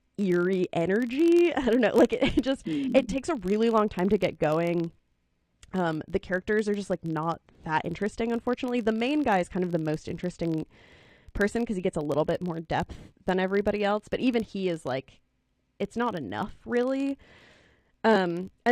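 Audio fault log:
Throughout: filter restarted on every block. The filter drops its state at each 1024-sample block boundary and begins again from silence, so every block opens with a small transient, heard as a buzz near 46.9 Hz that rises and falls with the speech level.
18.12–18.17 s: compressed frames skipped. Frames of the compressed stream were missing or rejected as damaged, so playback jumps ahead by roughly 70 ms.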